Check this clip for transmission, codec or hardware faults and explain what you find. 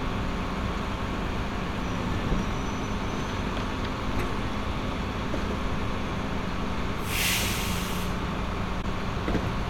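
One codec fault turns up, late in the clip. At 8.82 to 8.84 s there is AAC frame loss with muting. A compressed frame never reached the decoder, which filled the gap by setting that frame's spectrum to zero rather than guessing at the content. Because AAC frames overlap, the neighbouring windows fade the audio down into the gap and back up out of it. The result is a brief, soft-edged dropout of about 21 ms, consistent with a single lost frame, heard as a momentary hole.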